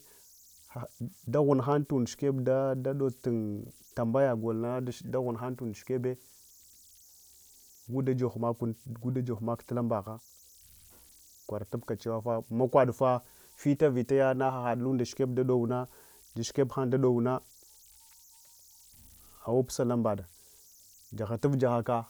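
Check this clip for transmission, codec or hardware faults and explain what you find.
There's one hardware fault here, and it runs the whole length of the recording: converter idle tones. A delta-sigma converter working without dither settles into repeating bit patterns whenever the speech gets quiet, and those patterns come out as a thin whistle somewhere around 7 kHz, sitting about 31 dB below the signal. You'll catch it as a high chirp in the pauses and a grainy fizz under the softer stretches of speech.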